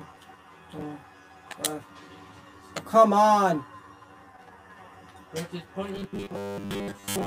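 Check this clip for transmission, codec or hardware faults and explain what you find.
Two faults are present: a comb-filter colouring that runs through the whole clip, and a robotic buzz that takes over the final stretch.

Channel delay (comb filtering) affects the entire recording. One channel arrives roughly 10 ms behind the other, and when the two are combined to mono, content shared by both cancels at evenly spaced frequencies. The first notch sits near 50 Hz, with further notches about every 100 Hz above it, giving a hollow, phasey tone. On a spectrogram this appears as fixed, evenly spaced dark horizontal bands that do not move with the material.

Robotic sound from repeated short buffers begins at 5.96 s and lasts until the clip ends at 7.26 s. The likely cause is audio arriving too infrequently, so the playback side keeps reusing its most recent short chunk while most of the real signal, on the order of two thirds or more, is skipped. 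The repeats impose a rigid 100 Hz buzz, which points to a chunk about 10 ms long. The waveform shows identical segments recurring every 10 ms, and the spectrogram shows stacked harmonic lines at multiples of 100 Hz.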